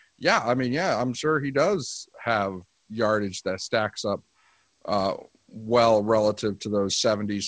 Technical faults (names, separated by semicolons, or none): none